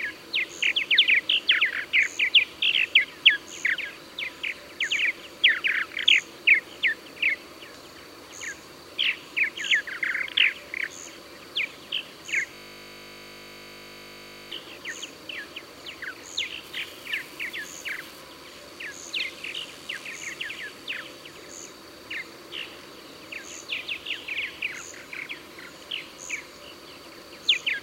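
The audio breaks into a system hang loop from 12.55 to 14.52 s. A 20 ms slice repeats roughly a hundred times, giving a steady 50 Hz buzz that shows as evenly spaced vertical stripes on a spectrogram and an identical repeating waveform cycle. From 16.64 to 18.21 s, an unreliable data bit adds a constant crackling fizz. A marginal data line flips one bit in random samples, producing same-height spikes on the waveform and broadband speckle across the spectrogram.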